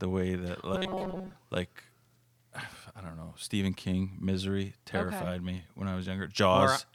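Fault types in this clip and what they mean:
Robotic sound from repeated short buffers: the speech briefly turns into a rigid 188 Hz metallic buzz, likely from a roughly 5 ms chunk looping while most real audio gets skipped.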